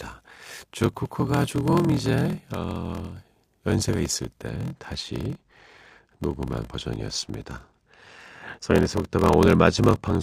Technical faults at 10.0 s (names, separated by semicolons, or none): block size mismatch (padded); channel delay (comb filtering)